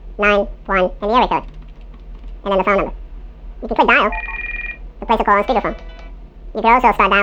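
From start to finish the sound runs twice as fast and a full octave (12 semitones) higher than it should, giving a hurried, chipmunk-like quality. This is a wrong sample rate fault: the audio is being played back at double its recorded rate with no conversion, which fits a 24 kHz recording played at 48 kHz.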